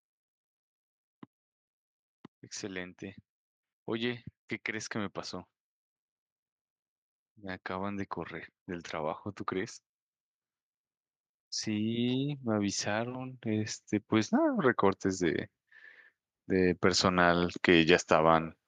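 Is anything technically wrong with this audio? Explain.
Yes. From 11.64 to 15.47 s, automatic gain rises about 7 dB. The gain control judged the input too quiet, so voice and background swell together.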